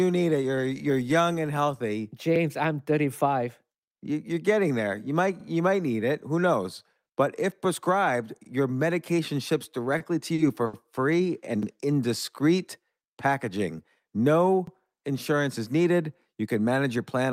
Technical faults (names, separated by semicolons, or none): overlapping chunks; short stall from a late packet